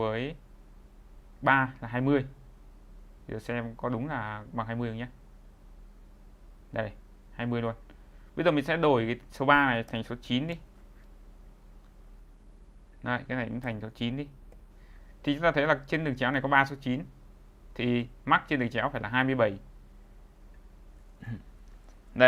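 From 12.2 s to 15.01 s a call bitrate drop starves the encoder of bits, consistent with roughly 64 falling to 21 kbps. The sound turns coarse and muffled, worst for about 1.5 s. A spectrogram shows content above 12 kHz vanishing, down from 20 kHz.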